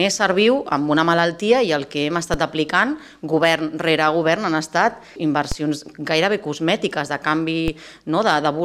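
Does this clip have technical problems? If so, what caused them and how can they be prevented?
Yes. DC steps at 2.34, 5.52 and 7.68 s: the waveform's zero line jumps by about -10 dBFS (about -11 dBFS for the last), heard as a low thump, then drains away as a 20 Hz high-pass lets the offset decay. Preventing this means keeping converters from recalibrating mid-recording and AC-coupling any offset-carrying input before it is switched in.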